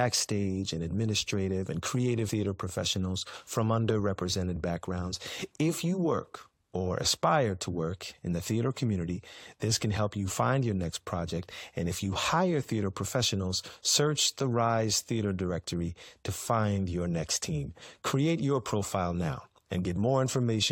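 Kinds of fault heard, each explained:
Damaged data in a compressed stream: a brief glitch at 2.29 s as the decoder misreads corrupted frames, loses sync and skips ahead to the next frame header.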